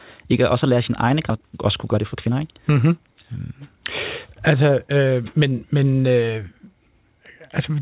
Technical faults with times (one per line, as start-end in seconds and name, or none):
1.30-1.32 skip ahead
1.35-3.86 jitter buffer speed-up